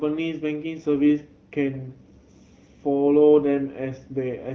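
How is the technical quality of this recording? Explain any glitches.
No glitches can be heard; the speech comes across as a normal AMR wideband (HD Voice) call at about 12.65 kbit/s, with the light coding character that rate brings and no content above roughly 6.9 kHz.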